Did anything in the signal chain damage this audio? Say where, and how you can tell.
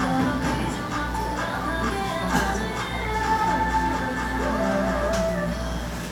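Yes: mains buzz entered in the analogue wiring, a steady raspy buzz present from start to end. Sharp switching spikes from a dimmer, rectifier or unshielded run arrive twice per 60 Hz cycle, stacking harmonics into the kilohertz range, sitting fairly loud beneath the sound.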